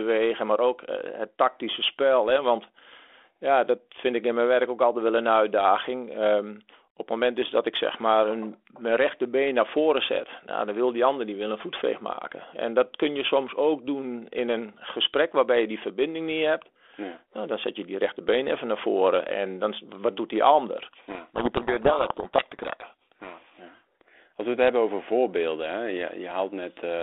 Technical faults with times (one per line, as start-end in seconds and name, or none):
20.92-23.59 codec payload misread